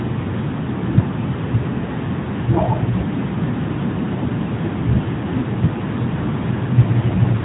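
Muffled, boxy speech with a buzzy, synthetic edge runs through the whole clip, and nothing is heard above 4 kHz. That is the AMR narrowband mobile codec (AMR-NB), which rebuilds speech from a coarse vocal-tract model; the plainly audible damage fits its 10.2 kbps mode.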